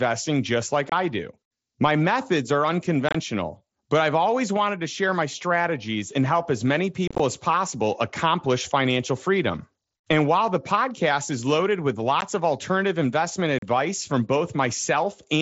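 Short, hard-edged holes cut into the speech at 0.90 s, after "methods are" at 3.09 s, at 7.08 s, after "podcast is loaded with" at 12.21 s, and after "of alternative investment" at 13.59 s. The third is a rough, chopped patch about 120 ms wide. This is unconcealed Bluetooth headset packet loss: packets between headset and phone on the wideband mSBC link, each about 7.5 ms long judging by the gaps, went missing and were replaced with silence or an idle pattern rather than patched over.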